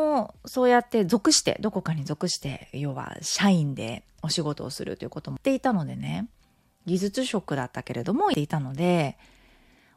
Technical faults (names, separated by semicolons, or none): compressed frames skipped